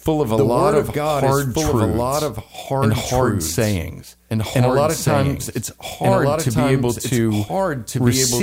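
A doubled audio track runs throughout this speech clip: a second, full-band copy trails the original by about one and a half seconds at roughly equal loudness, with no decay or room colour. It likely comes from a slower capture path recording the same signal twice.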